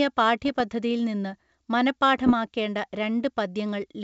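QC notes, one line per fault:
0.45–0.61 s and 2.24–2.33 s: bit errors on an ADPCM link. Corrupted codes, well under one percent of bits, derail the decoder's step size and predictor, so each error rings on as rough crackly bursts with brief level jumps. On the waveform these show as spiky jagged envelope jumps, and on the spectrogram as short broadband vertical smears.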